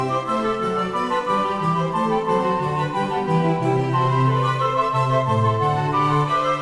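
Listening to this music clip, nothing stood out as a technical problem at any point.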